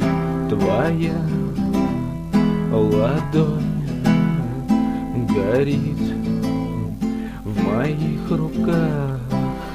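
Nothing goes wrong anywhere in this clip, so there's no fault to point to at any moment.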